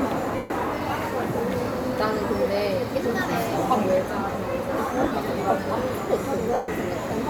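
Lost LE Audio frames occur at 0.36–0.50 s, at 3.03 s, scattered across 5.00–5.14 s with runs of up to about 40 ms, and at 6.54–6.68 s. In each gap, the LC3 decoder conceals the loss by replaying the last spectrum with randomised phase, so the sound smears into noise and then fades during the two longer gaps of roughly 140 ms. The light codec compression leaves at most a faint watery texture on noise and attacks.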